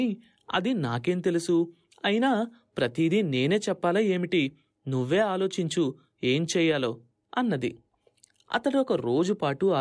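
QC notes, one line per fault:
No technical faults can be heard anywhere in the signal.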